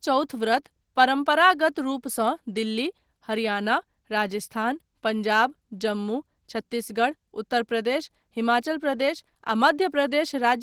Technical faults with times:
0.00-10.62 Opus voice compression

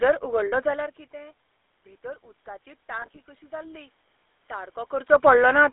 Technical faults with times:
0.00-5.72 GSM full-rate codec
0.46-0.53 lost GSM frames
2.00-5.19 automatic gain rising
3.02-3.21 lost GSM frames

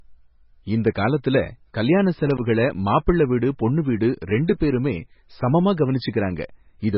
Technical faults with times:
0.00-6.97 MP3 compression
2.27-2.38 loose connector crackle

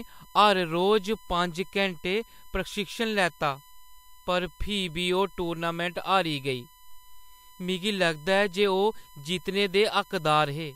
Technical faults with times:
0.00-10.76 USB whine

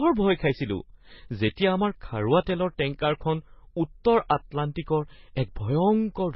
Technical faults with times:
0.00-6.35 transcoding between lossy codecs

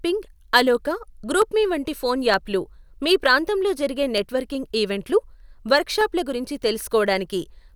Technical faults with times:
0.50-6.93 clock drift buffer slips

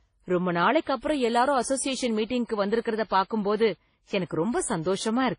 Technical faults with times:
0.00-5.38 transcoding between lossy codecs

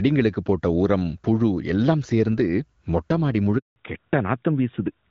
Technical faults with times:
3.58-3.76 handover gap
3.76-5.11 fallback to narrowband

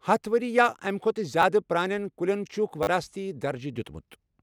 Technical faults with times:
1.42 repeated buffer
2.83-2.87 repeated buffer

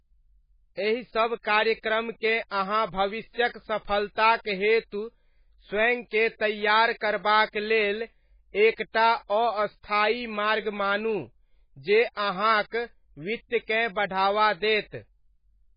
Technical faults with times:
0.00-15.76 MP3 compression

